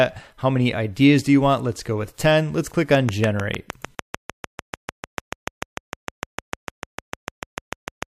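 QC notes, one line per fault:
2.95–8.04 s, train of clicks: a regular ticking of about 6.7 clicks per second, around forty in all, each standing out well above the audio at its peak, roughly 15 dB higher, and present in quiet gaps as well. The clicks share the same shape and keep an even pace. That sets them apart from random crackle or isolated pops, and because they sit on top of the audio rather than cutting it out, they are not dropouts. The likely cause is interference from nearby equipment or a faulty connection or power supply.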